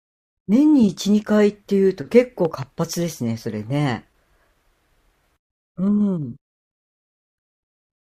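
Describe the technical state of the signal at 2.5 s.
At 2.5 s the speech is hit by a loud pop, two sharp thumps between 2.45 and 2.65 s, peaking a few decibels above the speech. A voltage pulse was likely added by a plug, switch or static discharge. Unlike a dropout, the speech continues underneath.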